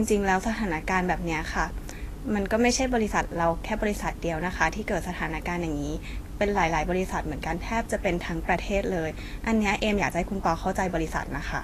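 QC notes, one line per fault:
Throughout, likely Vorbis compression: the speech sounds hissy and grainy, with a roughened edge on sustained tones and softened attacks, and nothing comes through above 14.2 kHz. The encoder seems to have quantised the treble so coarsely that the fine detail up there was replaced by noise of roughly the same energy, and it lowered the cut-off to save bits. The damage is plainly audible, which fits a low bitrate of around 36 kbps.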